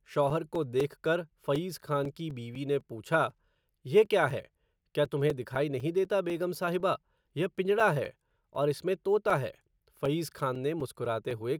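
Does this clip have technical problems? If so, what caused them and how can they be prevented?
Yes. Periodic USB or driver dropouts run from 0.05 s to 11.31 s, every 0.25 s: a background task stalls the USB bus or audio driver, punching roughly 4 ms silent gaps into the speech, heard as regular ticks. Preventing it means disabling USB power saving and removing the offending background process.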